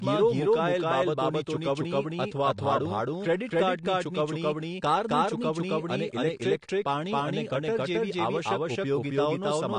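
Speech runs with a doubled audio track throughout: a second full-band copy trails by about a third of a second at roughly the same level. Unlike an echo or reverb it never decays and carries no room colour, so it is likely a second capture path or misaligned edit. AAC compression is also plainly audible, with nothing above 9.8 kHz. Unlike a simple low-pass filter, it adds a smeared, warbling texture on sustained sounds and sibilants, likely from AAC-LC at a low bitrate near 32 kbps.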